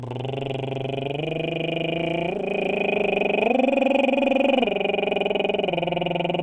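No faults to log on this music clip.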